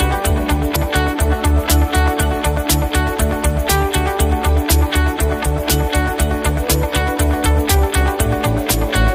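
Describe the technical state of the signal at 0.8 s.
Compressed frames skipped at 0.75 s: about two 26.1 ms frames drop out, so the audio jumps ahead roughly 50 ms, leaving a brief smeared blip where overlapping frames join.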